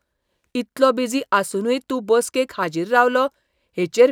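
No technical faults can be heard in the speech.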